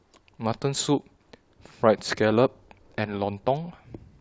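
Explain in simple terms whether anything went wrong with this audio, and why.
Nothing went wrong with this audio, because no fault can be heard anywhere in it.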